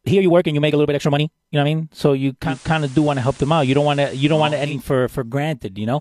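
Right from the start, up to 1.74 s, the speech runs at about 1.71 times its natural pace while the pitch stays put. That's a time-stretched section, likely software squeezing the audio to fit a shorter slot by dropping short slices and butting the remaining pieces together. You hear it as rushed, and then the pace drops back abruptly to normal once the section ends.

At 2.42 s the sound cross-fades over about 155 ms into something hissier. That's digital radio blending to analogue: the receiver lost the digital stream and fell back to the FM broadcast of the same station. There's a steady hiss roughly 25 dB below the speech. The level doesn't shift at all. At 4.79 s it blends back to the cleaner digital sound.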